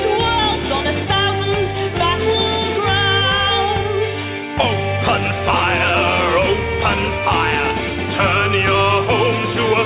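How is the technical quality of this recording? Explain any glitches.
No glitches to speak of; the audio has the narrow, phone-like band of a call line, with nothing above about 4 kHz, which fits a standard narrowband telephone codec doing its ordinary job.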